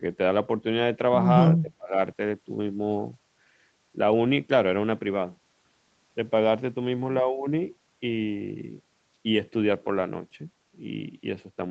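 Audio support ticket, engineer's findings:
Speech dips 1.58–1.96 s, about 25 dB deepest, roughly 300 ms total; waveform notches, spectrogram gaps. Likely speech suppressed in double talk, echo canceller ducking near end.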